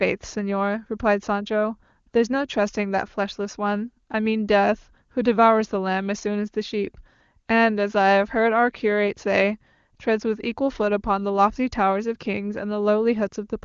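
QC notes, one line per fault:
No faults to note; the speech comes through the AMR wideband (HD Voice) codec with nothing heard above about 7.2 kHz.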